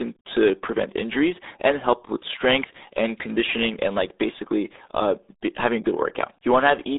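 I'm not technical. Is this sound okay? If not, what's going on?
No. Throughout the clip, the speech has gone through the RealAudio 14.4 codec, an old format built for dial-up modems. It squeezes sound very hard. Nothing above 3.8 kHz survives, and little below 250 Hz. So the speech sounds muffled and gargly.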